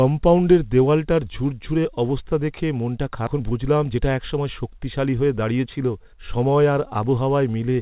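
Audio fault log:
3.09–7.08 s, jitter buffer speed-up. After "ঝুরঝুরে অবস্থা দেখে মনটা", speech runs at 112% speed, same pitch. Repeated pitch-period cuts trim about half a second of backlog.
3.27–3.29 s, skip ahead. Just after "ঝুরঝুরে অবস্থা দেখে মনটা", playback jumps forward with no gap. Roughly a second of speech is dropped while later audio waits.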